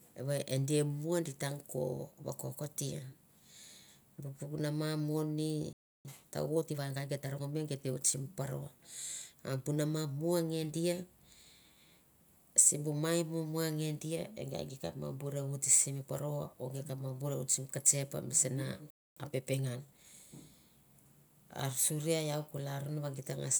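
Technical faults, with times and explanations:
5.73–6.05 s playback stall: the speech cuts to silence for about 320 ms mid-flow, likely because the player ran dry.
6.05–8.17 s time-compressed catch-up: after "mama mo ni" the speech runs 1.15 times fast at normal pitch, from spliced, cross-faded pieces. It is not a pitch-raising speed-up.
18.90–19.17 s playback stall: after "ketsep mi sana" the speech goes silent for about 260 ms, likely a starved or blocked player.
19.17–20.19 s time-compressed catch-up: the player trims its backlog, hurrying the speech to 1.25 times speed with pitch unchanged, unlike a tape-style speed change.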